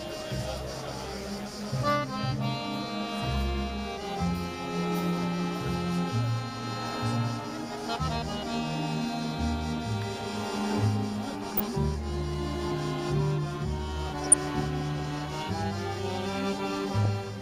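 At 11.52 to 11.63 s, 14.12 to 14.34 s and 17.03 to 17.06 s the sound breaks into DAB burbling: short blips of noise in single sub-bands. Residual bit errors, likely at a fraction of a percent, slip past error correction and corrupt samples.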